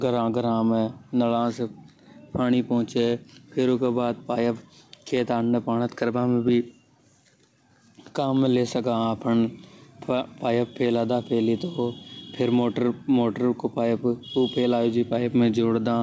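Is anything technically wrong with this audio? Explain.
Yes. Gain pumping runs through the whole speech clip. The gain swings by around 5 dB. This is likely an input gain set far too high, with a fast limiter clamping down on peaks. Levels sound squashed. The band stops at 8 kHz, which fits a G.722 call codec at 64 kbps.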